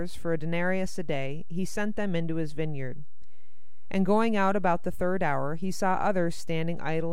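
Throughout the speech, a DC offset of about -27 dBFS pushes the waveform off zero; unlike hum or rumble, it has no pitch or audible tone, only constant 0 Hz energy consuming headroom.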